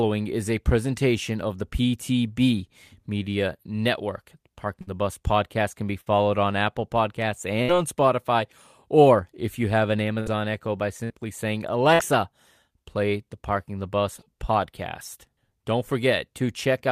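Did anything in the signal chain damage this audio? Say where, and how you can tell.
Yes. The network stage dropped packets in six bursts of packet loss, at 4.81, 6.01 ("podcast can be"), 7.62, 10.20 ("if you have an"), 11.04 and 11.94 s. Each time the receiver stretched the last sound for about 50 to 60 ms, fading it as a held buzz or hiss, then skipped ahead, losing about 60 ms of speech.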